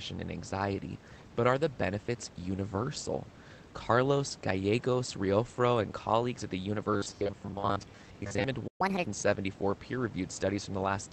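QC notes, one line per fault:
6.94–8.44 s, robotic sound from repeated short buffers: right after "and colleagues at the", the sound becomes a rigid metallic buzz near 100 Hz. This likely comes from audio arriving too seldom, so a 10 ms slice is looped over most of the stretch. On a spectrogram, evenly spaced harmonic bands lock at 100 Hz multiples.
8.67–8.81 s, playback stall: the output drops out for about 120 ms in mid-flow, likely because the player ran out of data or its thread was blocked. The waveform shows a flat line, and the spectrogram shows a clean vertical blank gap across all frequencies.
8.81–9.05 s, catch-up at higher speed: the backlog after the gap plays back at 1.5 times normal speed, raising the pitch by roughly seven semitones before it snaps back. On a spectrogram, the harmonics shift upward and sit compressed in time, then return to their previous spacing.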